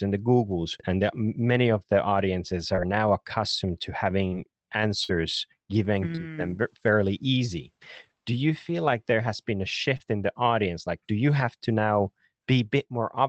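Brief smears or wobbles at 2.75, 4.27, 6.15 and 9.97 s are short concealed packet loss: 20 to 40 ms of audio arrived too late, and the receiver papered over it by extending the preceding sound. At 5.04 s a held, fading fill lasting about 55 ms marks a burst of packet loss. Several consecutive packets were lost, so the decoder stretched and faded the last sound before resuming further on, with that stretch gone. All of this passes through an Opus call path whose coding limits the band to about 8 kHz, which fits a bitrate of around 20 kbps.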